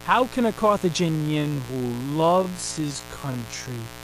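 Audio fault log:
throughout: mains buzz. A steady, raspy buzz sits under the speech, built on 60 Hz and harmonics reaching several kHz. Sharp switching spikes, twice in each mains cycle, give the rasp. It runs roughly 20 dB below the speech.
1.04 s to the end: time-stretched section. The speech abruptly slows to 0.512 times its pace while pitch stays put. Short pieces are repeated to fill the extra time, so it drags. Software stretching to fit a length is the likely cause.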